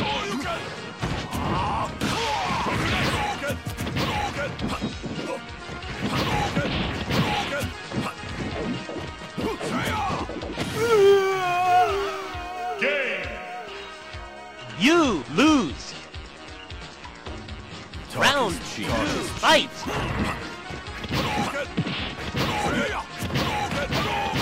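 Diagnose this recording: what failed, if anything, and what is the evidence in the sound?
Nothing failed here as far as the ear can tell, since no stage of the chain leaves any audible trace of trouble anywhere in the recording.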